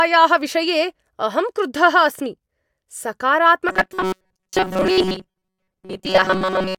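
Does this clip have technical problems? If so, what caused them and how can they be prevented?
Yes. From 3.69 s to 6.79 s the speech turns into a rigid, metallic buzz at 188 Hz that roughly tracks the words. This is robotic sound from repeated short buffers, likely from audio arriving too seldom: a chunk of about 5.3 ms is replayed while most of the real audio is skipped. Larger jitter buffers and steadier delivery prevent it.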